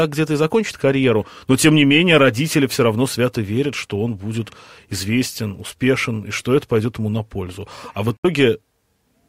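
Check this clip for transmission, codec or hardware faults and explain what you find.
One fault is audible: a brief dropout near the end of the clip, consistent with a Bluetooth stall.

From 8.17 to 8.25 s the audio cuts to about 66 ms of silence and then resumes. The cause is likely a Bluetooth stall. Radio interference delayed packets on the wireless link, so the receiving device's buffer emptied before replacements arrived, and playback halted until the retransmitted data filled it again. The result is a clean, abrupt gap rather than noise or distortion.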